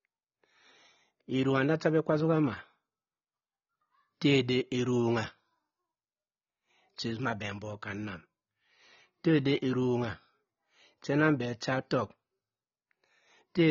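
Throughout, the speech has nothing above 6.9 kHz and warbles on sibilants, likely AAC compression at a rate fitting 24 kbps; plain low-pass filtering would dull without warbling.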